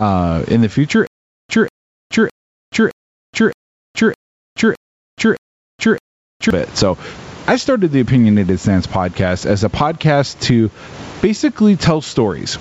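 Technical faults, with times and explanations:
Throughout: gain pumping. The level is pulled down on each loud sound, swinging by something like 20 dB. That points to gain set far too high, with a fast limiter likely clamping down, so everything sounds squashed.
1.07 to 6.50 s: stutter with silent gaps. A 190 ms fragment repeats nine times at a steady 614 ms pace, each followed by 424 ms of dead digital silence. Likely the stream stalled and replayed its last chunk on each retry, so that stretch of audio is lost.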